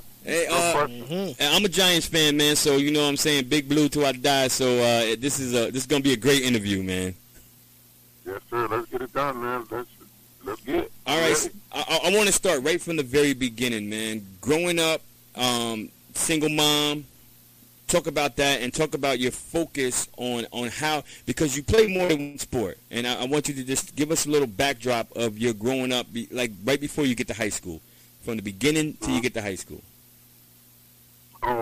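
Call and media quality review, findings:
Repeated packet loss (robotic sound), 21.75 to 22.36 s. Choppy stretch with six holes in quick succession, the longest about 139 ms. Receive-side jitter buffer or network path. Lost or late packets concealed by extending the last sound, about 41% of the span patched. Unlike a single dropout, the holes recur within the same 0.6 s, and the fill continuing the last sound gives a choppy character rather than clean silence.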